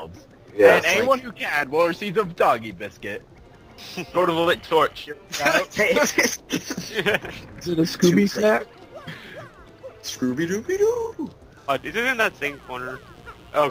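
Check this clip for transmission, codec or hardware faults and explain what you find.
One fault stands out: mains buzz from 11.74 to 13.60 s. Sharp switching spikes from something like a dimmer, rectifier or unshielded cable enter twice per 60 Hz cycle, spraying harmonics up to several kHz. The result is a raspy, steady buzz roughly 30 dB below the signal. Unlike plain hum, which is a smooth low tone, it has a gritty, bright edge.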